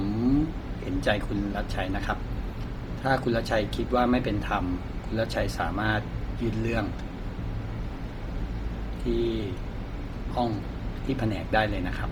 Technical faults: Bluetooth LC3 compression

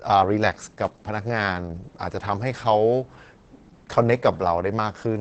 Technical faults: Opus voice compression

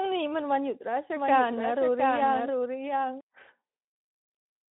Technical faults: doubled audio track

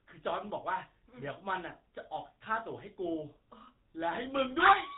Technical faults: GSM full-rate codec

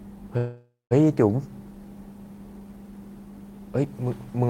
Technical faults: call audio freeze

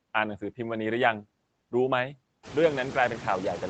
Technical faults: noise suppressor artifacts

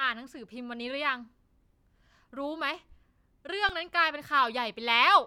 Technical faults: underrun with held sample

